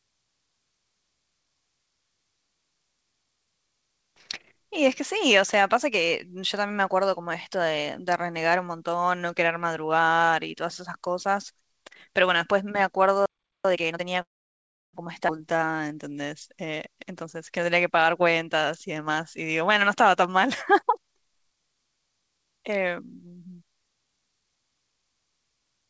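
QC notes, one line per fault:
13.26–13.65 s, playback stall: the speech cuts out for about 0.39 s mid-flow. The player likely ran dry of data or was blocked before resuming.
13.65–14.03 s, time-compressed catch-up: the speech rushes at double speed with unchanged pitch. Small pieces are cut and cross-faded to clear the backlog.
14.22–14.95 s, call audio freeze: the last sound trails off and then goes silent for about 0.68 s. Delayed packets likely emptied the jitter buffer. The speech resumes where it stopped, with nothing lost.
15.27–15.30 s, skip ahead: playback jumps forward, dropping roughly 0.4 s of speech. The two sides are joined almost directly, so there is barely any gap.
15.53–16.26 s, jitter buffer slow-down: the speech drags at 86% speed with its pitch intact. Repeated pitch periods add 111 ms to rebuild the buffer's reserve.
16.61–21.51 s, jitter buffer speed-up: the speech runs hurried at 109% speed with no pitch change. 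Short pitch-period pieces are trimmed repeatedly, removing about 0.4 s to cut the excess delay.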